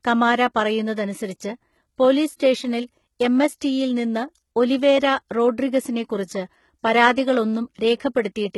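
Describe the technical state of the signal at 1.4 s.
At 1.4 s the speech is likely passing through HE-AAC compression, heavy enough to suggest a bitrate around 16 kbps, and it persists through the whole clip. The upper band is synthesised from copied lower bands, so sibilants sound gritty, metallic or lispy.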